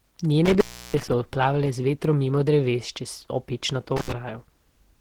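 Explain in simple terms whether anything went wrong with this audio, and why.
Two things went wrong. Throughout the clip, the speech sounds hoarse, rough and muffled, with a grainy edge. That is Opus compression, likely squeezed hard to save space. The encoder switched to a speech-focused mode that trades clarity for size.

There is also an intermittent contact, like a loose plug. From 0.46 to 1.09 seconds the sound cuts out for about a third of a second. From 3.96 to 4.13 seconds it drops out briefly. Each gap has crackles at its edges.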